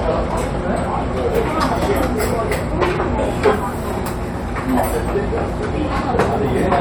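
A recording of everyday sounds, with no technical fault to be heard anywhere in it. Nothing in the clip calls for a time stamp or a cause.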